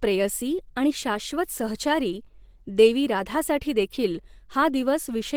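The whole speech clip sounds muffled, hoarse and grainy throughout, likely Opus compression in its hybrid speech mode at a low rate, around 16 kbps.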